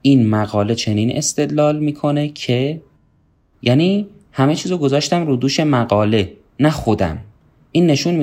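No technical faults detected.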